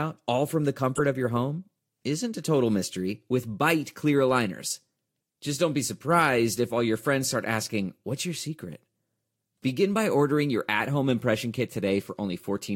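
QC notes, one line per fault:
0.96–1.01 s, corrupt frame decoded: right after "all from the" there's a short squeaky burst, peaking around -15 dBFS, before "of your home isn't". Damaged bits in a few compressed frames got decoded anyway, throwing energy into the wrong frequencies for about 50 ms.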